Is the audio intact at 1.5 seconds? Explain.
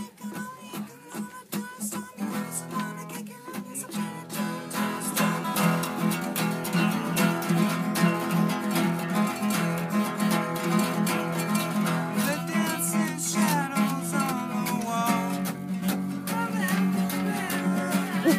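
Yes, at 1.5 seconds the audio is intact, with no dropout, click, distortion or other fault at that moment.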